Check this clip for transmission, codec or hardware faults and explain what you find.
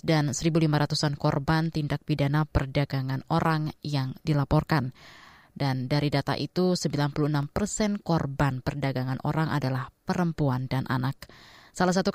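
Two brief underruns with held sample, at 0.49 s and 7.43 s. The output buffer ran dry, so the converter held its last value for 0.7 ms, then 1.7 ms. The speech flattens momentarily, then resumes after a little live audio was lost.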